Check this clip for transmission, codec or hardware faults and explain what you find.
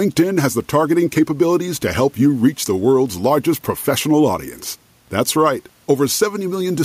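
No faults detected.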